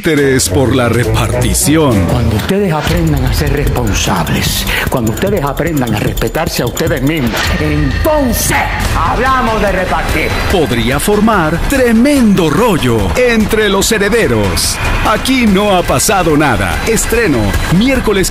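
Nothing stood out on listening to this audio.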